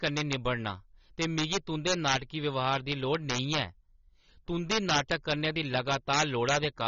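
Integer overflow runs through the whole speech clip. The loudest peaks are driven roughly 6 dB past the largest value the integer format can hold, and the signal wraps instead of being limited. Each excess peak jumps across the full range to the opposite sign. Only a very small share of samples crosses the limit, so the damage comes as scattered, violent cracks on loud moments. They are far sharper and harsher than ordinary clipping.

AAC compression also affects the speech from start to finish, and the damage is plainly audible. Nothing is present above 6.9 kHz, so the sound is dull and lacks air. The spectral texture suggests AAC-LC, likely at a low bitrate of about 24 kbps. At that rate the encoder has too few bits for its quantisation against the hearing model. Sibilants turn fizzy and sustained sounds warble and smear.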